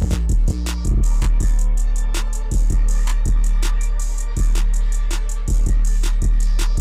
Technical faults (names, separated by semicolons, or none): channel delay (comb filtering)